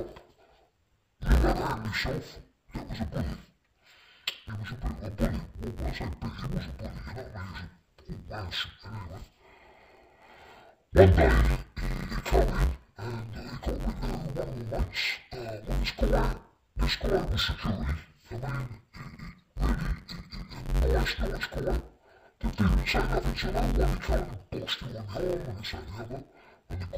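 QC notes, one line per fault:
throughout, interleaved audio read as planar: 10.88 ms blocks split wrongly into channels give a dull, robotic buzz at 91.9 Hz, with no octave drop, unlike long-block misreads.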